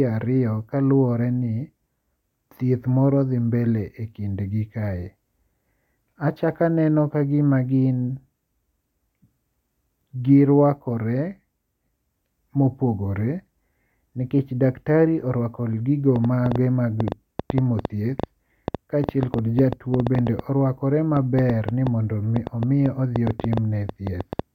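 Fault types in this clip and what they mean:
Train of clicks: From 16.16 s to 24.40 s, a run of sharp, near-identical pulses sits on top of the speech. They come about six times a second, at an uneven pace. There are around fifty in all. Each one stands well above the speech, roughly 15 dB louder. The ticking carries on through the pauses as well. The likely source is interference from nearby equipment or a faulty connection or power supply.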